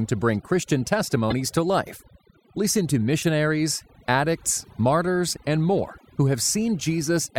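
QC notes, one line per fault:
Throughout: overdone noise removal. A noise reducer set far too aggressively pulls individual frequency bands down or out entirely whenever they sit close to its noise estimate, and the quieter parts of the speech fall under that threshold along with the noise. Pauses drop to near silence sprinkled with twinkling, isolated specks of tone.
1.29–1.33 s and 3.22–3.24 s: corrupt frame decoded. Damaged bits in a few compressed frames were decoded anyway, so misread gains and codes placed energy at frequencies where none belonged for roughly the length of those frames. Each spans about three frames. The first, just before "to life", peaks around -5 dBFS. The second is much quieter, around -20 dBFS.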